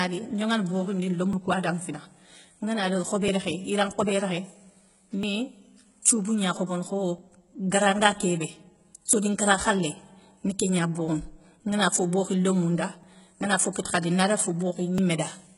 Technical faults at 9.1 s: HE-AAC compression; audio missing between chunks

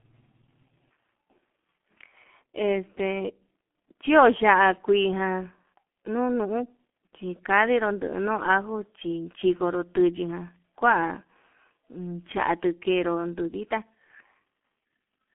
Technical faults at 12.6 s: G.723.1 codec

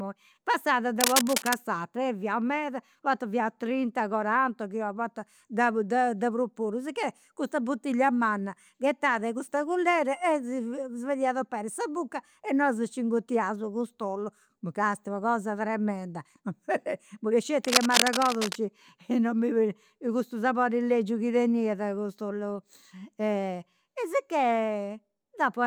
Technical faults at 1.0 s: cable scratch noise

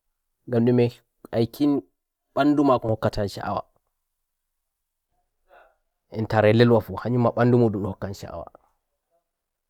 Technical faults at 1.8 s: channel delay (comb filtering)

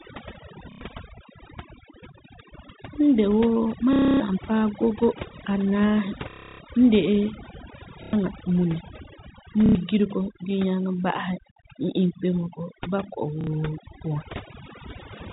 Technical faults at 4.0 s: overdone noise removal; packet loss with last packet repeated

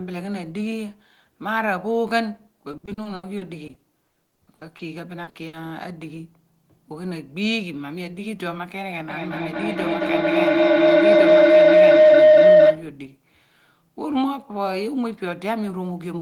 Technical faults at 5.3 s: short concealed packet loss; burst of packet loss

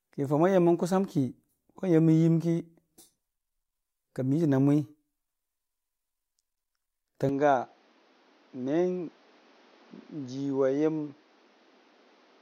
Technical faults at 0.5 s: none

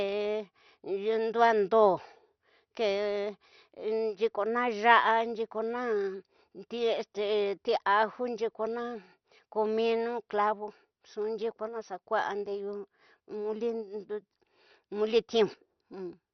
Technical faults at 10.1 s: MP2 compression

